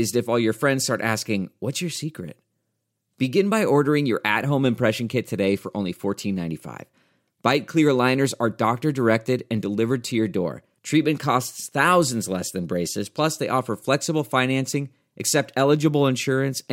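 Nothing goes wrong anywhere in this stretch of speech; there's no glitch, dropout or other technical fault to point to at any moment.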